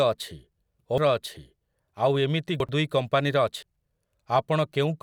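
Compressed frames skipped at 0.98 s, 2.60–2.69 s (between "ଆଉ ଏମିତି" and "ଦୁଇ କମ୍ପାନୀର") and 3.63 s (after "ଦୁଇ କମ୍ପାନୀର"): lost or rejected frames make the speech jump ahead by roughly 0.3, 0.3 and 0.15 s.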